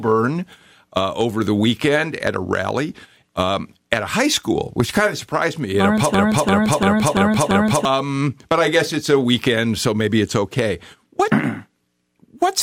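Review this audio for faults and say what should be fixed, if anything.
From 6.14 s to 7.85 s the speech freezes into a machine-gun stutter: one fragment of about 341 ms repeats five times, at roughly 2.9 per second. This is a system hang loop. The computer or audio driver stalled, while the sound hardware kept replaying the same ring buffer, whose length fits a 16384-sample buffer. About a second and a half of the real audio is lost. Prevent it by fixing the driver or system stall and adding a watchdog that mutes output when the buffer stops being refilled.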